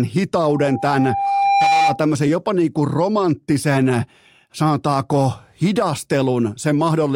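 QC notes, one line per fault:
0.44–2.03 s, loudspeaker feedback squeal: the microphone is picking up the loudspeaker it feeds, and around 796 Hz the loop gain climbs past unity, so that one frequency keeps reinforcing itself on each trip round. The result is a pure tone that swells over about a second and a half until it sits roughly 5 dB above the speech, ringing as a sustained squeal until it drops away.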